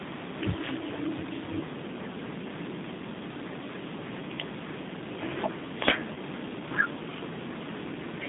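Right from the start, the whole clip has the G.729 codec sound: speech squeezed into a roughly 150 Hz to 3.7 kHz band and rebuilt from a filter and a handful of pulses, which gives it that plainly rough, slightly synthetic edge typical of 8 kbit/s G.729A.

Then at 6.14 to 6.18 s there's VoIP packet loss concealed by the speech codec. About 20 ms of audio went missing, which fits two 10 ms frames. The decoder fills the gap by stretching its last pitch and filter at falling gain, so you get a short buzzy or noisy smear before the speech comes back.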